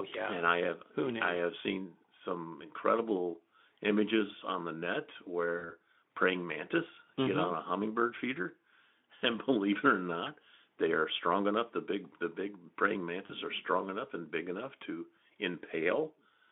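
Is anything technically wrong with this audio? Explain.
Yes. Twice in this speech, at 5.57 to 5.73 s (after "images on the net", before "praying mantis") and 13.25 to 13.32 s (after "big the big praying", before "are strong enough and"), about 40 ms of packets went missing, which fits two 20 ms frames. This is VoIP packet loss concealed by the speech codec. The Speex decoder filled each gap by extending its last pitch and filter at falling gain, so the sound smears into a brief buzzy tone or coloured noise that fades, and stays weak or distorted as it recovers.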